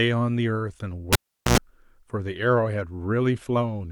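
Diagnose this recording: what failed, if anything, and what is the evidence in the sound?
Pop at 1.13 s, 0.4 s near silence, 90 ms of 60 Hz buzz as the tip touched, pop at 1.58 s: analogue cable pulled and plugged in.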